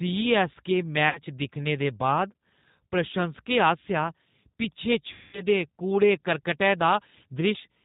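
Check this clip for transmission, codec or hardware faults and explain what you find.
Two faults are audible: G.729 codec coloration across the whole speech clip, and two bursts of VoIP packet loss concealed by the speech codec.

The G.729 codec, here the G.729A variant at 8 kbit/s, is present throughout with plainly audible damage. It rebuilds each 10 ms frame from a vocal tract filter, a pitch predictor and a few pulses, which makes the speech rough and slightly synthetic. On a spectrogram, energy stops abruptly at 4 kHz, and harmonics look smeared and grainy rather than cleanly striated.

VoIP packet loss concealed by the speech codec occurs from 1.09 to 1.21 s and again from 5.13 to 5.42 s. About 60 ms of audio went missing in the first gap, which fits three 20 ms packets, and about 200 ms in the second, which fits ten. With no new data, the decoder repeats its last pitch and filter at falling gain, so the speech turns into a buzzy tone or coloured noise that fades. 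Since each frame builds on the last, the sound stays weak after packets resume. A spectrogram shows frozen, dimming energy across each gap, and the waveform tapers off.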